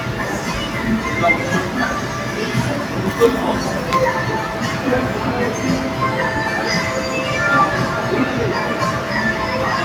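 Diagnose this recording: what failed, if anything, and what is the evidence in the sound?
Call processing failed: a noise suppressor applied to sounds stayed active throughout. Sustained parts and decaying tails sink by around 5 dB while onsets pass, so the level pumps. The speech-tuned suppressor treats steady sound and reverb as noise and attenuates them.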